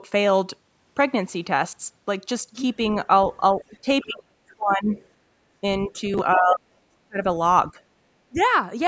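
Faint scraps of the other side's voice leaking through, about 25 dB below the speech, at 2.87–2.96, 3.62–4.06 and 4.92–5.07 s. They are likely residual loudspeaker echo. Speech suppressed in double talk occurs at 3.6–4.92, 5.61–6.03, 6.34–7.2 and 8.28–8.38 s. The talker's own voice dips by up to about 40 dB, most likely an echo canceller ducking both sides, unlike dropouts, which ignore the far end.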